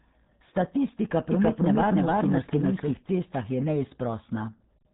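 Throughout, the speech carries heavy RealAudio 14.4 codec damage. Nothing passes above 3.8 kHz. It sounds muffled and gargly, fitting an 8 kbit/s dial-up stream.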